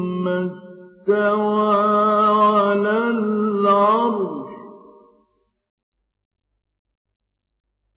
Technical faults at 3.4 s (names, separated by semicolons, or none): none